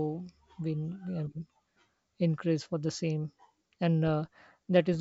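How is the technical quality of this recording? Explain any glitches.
No audible faults.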